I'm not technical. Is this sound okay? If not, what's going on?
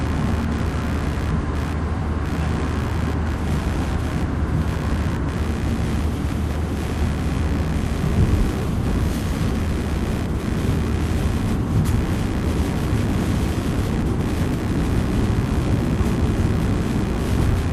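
No. All the way through there's a rough, scratchy buzz, pulsing roughly seventy times a second, that rises and falls with what the computer is doing rather than with the sound. This is computer activity noise: the processor, graphics card or mouse disturb the electrical ground the audio circuit shares.

At 13.22 s there's a brief blip. This is DAB burbling: weak digital radio reception let a few errors slip past the error correction, so short blips of noise appear in parts of the sound.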